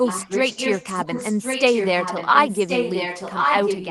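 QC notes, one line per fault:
0.03–3.9 s, echo leak: a second, slightly quieter copy of the speech trails the original by about 1.08 s, running from the start to the end. The likely cause is a loudspeaker on the far end whose echo canceller let its microphone pickup through and sent it back. On a spectrogram the speech patterns repeat shifted 1.08 s later, overlapping the next phrases below the 12 kHz Opus band edge.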